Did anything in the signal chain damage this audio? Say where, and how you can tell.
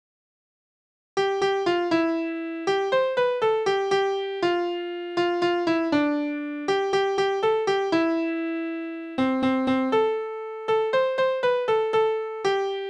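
No, nothing in the signal chain damaged this audio that can be pointed to at any stage.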